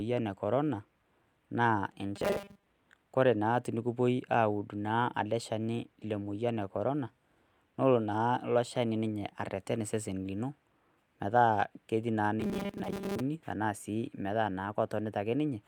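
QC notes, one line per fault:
2.16–2.66 s: robotic sound from repeated short buffers. The speech becomes a rigid metallic buzz at 200 Hz, likely from a roughly 5 ms block repeating over most of the audio.
12.40–13.21 s: robotic sound from repeated short buffers. The same 200 Hz buzz returns. A 5 ms fragment likely loops while most of the real audio is skipped.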